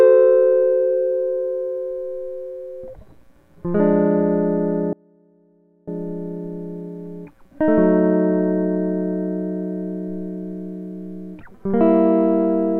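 Music, with an audio dropout to a faint residue from 4.93 to 5.88 s. The music cuts out abruptly for about 0.94 s. Only a faint leak remains, roughly 30 dB below normal level. This is likely a brief signal loss while the path stayed live.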